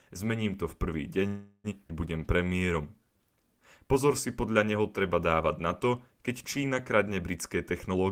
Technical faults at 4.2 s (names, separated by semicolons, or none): none